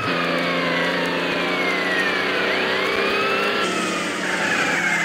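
The audio has two brief chunks-out-of-order faults, at 1.32 to 1.40 s and 3.40 to 3.48 s. In each, one 40 ms chunk arrived a chunk late and plays after the one that should follow it, so the sound jumbles for a moment. Unlike a dropout or a stutter, nothing goes missing and nothing repeats. The same material is there, swapped in order.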